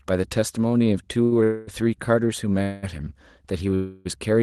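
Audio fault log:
1.24–1.34 s, short stall from a late packet: the sound hangs on for about 76 ms with a faint buzzy edge, then picks up right where it left off. A packet showed up late, the jitter buffer ran dry, and the receiver stretched what it had. Nothing gets lost, it just drags.
1.44–1.69 s, 2.62–2.85 s, 3.75–4.07 s, call audio freeze: three longer holds of about 236, 202 and 306 ms. The last sound smears into a fading buzz that never quite drops to silence, then the audio resumes from the same point, so nothing's skipped. The likely cause is packets held up in transit, emptying the jitter buffer. Around them you can hear the usual Opus coding texture and the top end rolling off near 12 kHz.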